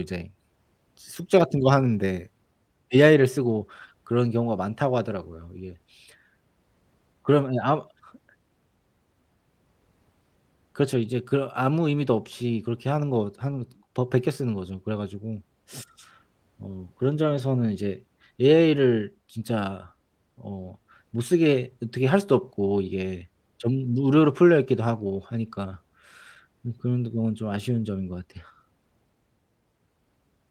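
A speech recording with two brief patches of roughness at 13.51 s and 17.37 s, each lasting about 20 ms: the sound turns grainier and noisier without any gap. Both are lost packets rebuilt from error correction, where the decoder filled each hole with a low-bitrate copy sent in the next packet, which fits a single lost packet each time.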